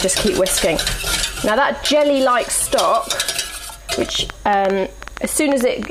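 A train of clicks runs from 3.93 to 5.86 s: around fifteen similar pulses at about 7.8 per second, spaced unevenly, peaking roughly 10 dB above the sound. They tick over the sound and any pauses, likely from nearby interference or a faulty connection.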